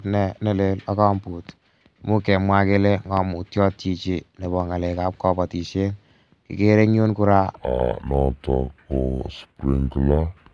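From 7.55 s, just after "eng' yun kora", to the end at 10.54 s, the speech drops to a wrong sample rate: it slows to about 0.69 times speed and falls about 6.5 semitones, consistent with 32 kHz audio played at 22 kHz. Unlike a pitch shift or time stretch, pitch and tempo move together.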